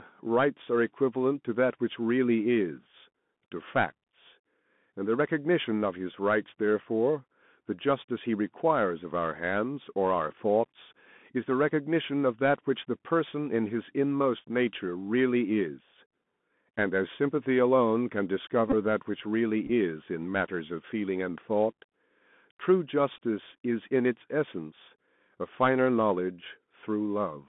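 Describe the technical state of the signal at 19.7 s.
A Bluetooth headset packet repeat falls here, from 19.65 to 19.71 s. Voice packets were lost across about 45 ms, roughly 22.5 ms in total. The decoder replayed the previous packet's bits instead. The longest run is only a few milliseconds, so it sounds like a brief rattle.

The Bluetooth CVSD headset codec shapes this moment too. It is a 64 kbps one-bit delta coder, and the line passes only 150 Hz to 3.5 kHz. The damage is plainly audible: a dull narrowband sound, scratchy sibilants, and a granular hiss underneath.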